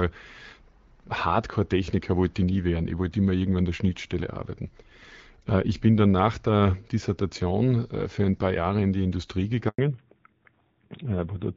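A phone-call speech recording is clear and wideband up to 9.68 s, carried on HD Voice whose light coding suggests AMR-WB at around 12.65 kbit/s. At 9.68 s a handover gap cuts the voice for 100 ms, until 9.78 s. As the call switches networks, no speech frames arrive, so the sound dies within a few tens of milliseconds and stays silent. On a waveform this is a short flat-line hole. A spectrogram shows a clean vertical blank stripe across every frequency. From 9.78 s to the end, the call makes a fallback to narrowband, likely onto AMR-NB at about 7.4 kbit/s. Nothing above 4 kHz remains, so the voice turns duller and rougher than before the switch. A spectrogram shows the energy between 4 kHz and the former 7 kHz ceiling vanishing at once, leaving a hard horizontal cut-off line for the rest of the clip.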